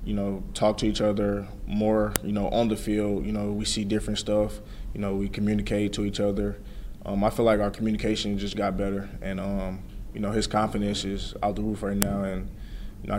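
At 2.16 s there's a sharp, loud snap, and the same thing happens again at 12.02 s. Both are a file header played as audio. It looks like separate WAV pieces were strung together without stripping their headers, so a few dozen bytes of header data got read as sample values. That produces a brief, hard click that cuts right through whatever the sound is doing at that moment, marking where each new piece begins.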